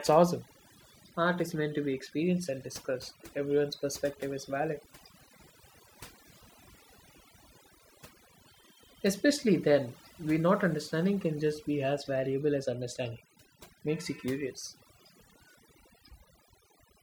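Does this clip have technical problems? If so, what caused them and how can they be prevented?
Yes. Overdone noise removal runs throughout this speech: noise reduction set too aggressively pulls any band near its noise estimate far down, so pauses fall to near silence with twinkling specks. Unlike a noise gate, which mutes everything together, this cuts individual frequency bands. Prevent it by using a gentler reduction amount and a clean noise profile, and by checking quiet speech passages before applying it.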